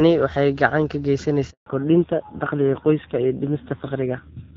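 A handover gap runs from 1.50 to 1.66 s, right after "gacan ka": for about 160 ms no speech frames arrived while the call switched networks, so the speech cuts off abruptly and the syllables that followed are lost in dead silence.

A fallback to narrowband follows at 1.66 s and lasts to the end. The call leaves the clear HD Voice sound of the opening and drops to an older narrowband codec, so nothing above 4 kHz survives. The duller, rougher speech fits AMR-NB at about 5.9 kbit/s.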